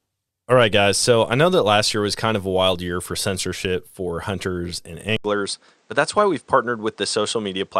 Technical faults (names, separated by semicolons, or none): DAB burbling; input switched to a poorer device